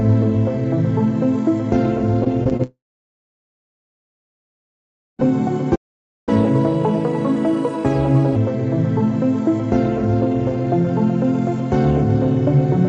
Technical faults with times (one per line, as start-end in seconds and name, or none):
2.24-2.61 repeated packet loss (robotic sound)
2.63-5.28 long network dropout
5.75-6.29 playback stall
6.29-8.36 catch-up at higher speed